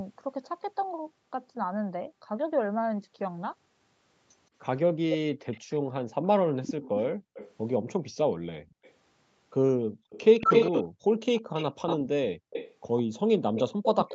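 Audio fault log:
5.11–7.52 s, 8.69–8.92 s and 10.1 s to the end, echo leak: the far end's echo canceller likely failed to fully cancel its loudspeaker sound from its microphone, so a copy was sent back. A second version of the speech trails the original by 164 ms. It sits about 10 dB below the speech in the first stretch and is faint, about 30 dB down, in the short second burst. From 10.1 s it is as loud as the speech itself.
5.81–8.77 s and 9.77–11.05 s, background gated by the echo canceller: while the loudspeaker was playing, the echo canceller clamped the microphone down to stop echo. The room sound dips by as much as about 40 dB and then returns when the canceller releases. The dropouts add up to roughly 0.7 s in the first window and about half a second in the second, so the background seems to switch off and on in brief gaps.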